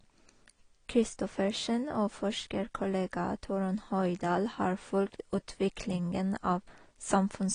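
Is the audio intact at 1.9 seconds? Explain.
No. At 1.9 seconds, as throughout, the speech sounds dull and fizzy with nothing above 9.9 kHz, likely AAC compression quantising coarsely at a low bitrate near 32 kbps.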